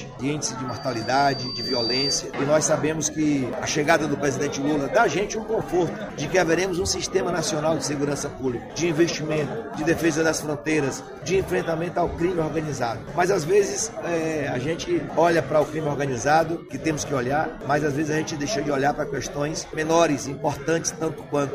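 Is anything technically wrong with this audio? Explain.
Yes: there is a loudspeaker feedback squeal from 0.68 to 2.23 s. A microphone picked up its own loudspeaker, and at 4.7 kHz the loop gain exceeded one, so that tone grows for about a second and a half into a piercing whistle roughly as loud as the surrounding sound.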